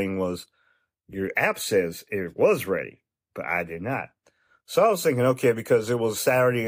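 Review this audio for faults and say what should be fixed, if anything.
No faults; nothing needs fixing.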